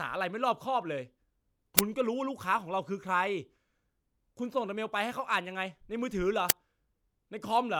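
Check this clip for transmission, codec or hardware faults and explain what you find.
Two faults are present, both the same kind. An uninitialised buffer plays at 1.79 s and again at 6.50 s. Each time, a block was sent out before audio filled it, so stale memory became samples. The result is a harsh, loud 5 ms crack.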